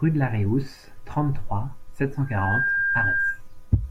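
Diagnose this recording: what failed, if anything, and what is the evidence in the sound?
From 2.25 s a 1.6 kHz tone swells into a squeal above the speech until 3.41 s. This is loudspeaker feedback squeal: the microphone keeps re-amplifying its own loudspeaker.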